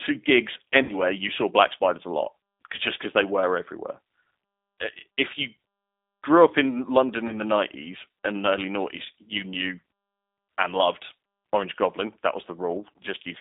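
G.729 codec damage runs through this whole speech recording, from start to finish. The G.729A coder at 8 kbit/s rebuilds each 10 ms frame from a vocal tract filter, a pitch predictor and a handful of pulses, and it plainly gives the voice a rough, slightly synthetic edge. The line band sits at roughly 250 Hz to 3.7 kHz, so the low body and everything above that are missing. VoIP packet loss concealed by the speech codec occurs at 0.83 to 0.94 s, just before "you saw black spiders", and again at 7.27 to 7.40 s. About 60 ms of audio is missing in the first gap, which fits three 20 ms packets, and 20 ms in the second, which fits one. In both cases the decoder extends its last pitch and filter with falling gain, smearing the sound into a fading buzzy tone or coloured noise. Because each frame depends on the previous one, the voice stays weakened and distorted briefly after the packets resume, which is why each disturbance lasts longer than the lost audio.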